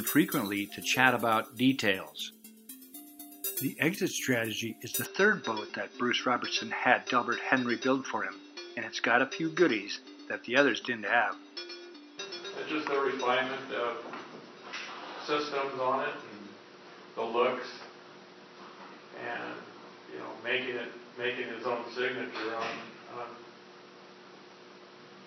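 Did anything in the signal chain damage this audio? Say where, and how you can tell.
Yes. From 5.05 s the band stops at 5.8 kHz, the level shifts by around 5 dB, and new noise appears. Likely the input switched to a poorer device, with no gap.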